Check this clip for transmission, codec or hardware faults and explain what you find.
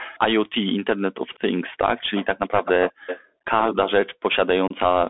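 There are four kinds of fault here: a narrowband Bluetooth link throughout, several echo leaks, two background dips from echo-canceller gating, and one dropout from headset packet loss.

Bluetooth CVSD headset codec runs the whole clip. The sound sits in a narrow band of roughly 250 Hz to 3.5 kHz, which fits a 64 kbps CVSD link. The one-bit delta coding can't keep up on loud high content, so s sounds go scratchy over a grainy hiss.

Echo leak shows up four times: 0.00–0.05 s and 1.34–1.39 s with a 195 ms delay, then 1.96–2.25 s and 2.47–3.20 s with a 250 ms delay. It's likely a far-end speakerphone whose canceller let some playback through. You hear a faint delayed copy that gets fairly prominent in the last stretch.

Background gated by the echo canceller happens at 2.92–3.06 s, dropping about 40 dB, and at 3.22–3.44 s, dropping about 22 dB. The canceller clamped the microphone hard while the loudspeaker played. 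The room tone dips out for a moment each time and then comes back.

Unconcealed Bluetooth headset packet loss hits at 4.68–4.73 s. About 26 ms of audio is gone, probably several short packets in a row, with silence or an idle pattern left in their place. It sounds like a sharp-edged hole, and the sound comes back a touch quieter right after.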